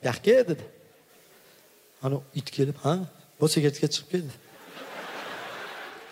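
Nothing goes wrong anywhere in this one, so there's no fault to point to at any moment.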